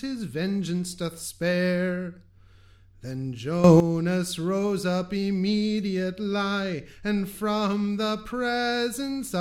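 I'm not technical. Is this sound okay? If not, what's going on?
No. At 3.64 s the sound and its background noise abruptly leap louder together until 3.80 s. This is a sudden gain jump, likely a volume change applied instantly rather than smoothly.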